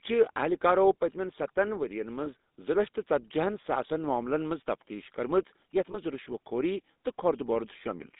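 The whole recording has the gritty, buzzy edge of the GSM full-rate codec, consistent with the 13 kbps full-rate codec. The vocal tract is modelled and excited with coarse pulse trains, so the speech sounds gravelly, and the band is squeezed to roughly 200 Hz to 3.7 kHz, with nothing bright above.

Then there are two lost GSM frames, one at 2.24 to 2.27 s and another at 5.92 to 5.97 s. Each sounds like a brief metallic, ringing smear where the decoder repeated the last good frame to cover a gap that fits a single 20 ms frame.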